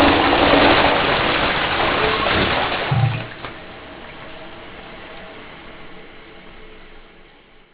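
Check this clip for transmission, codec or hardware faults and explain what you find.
There is one fault, present for the whole clip: aliasing. The sound points to a drop from 48 kHz to 8 kHz with no anti-alias filter, so content above 4 kHz folds back below it. That folded energy sits only slightly under the wanted signal, giving hissy, metallic grit right up to the 4 kHz band edge.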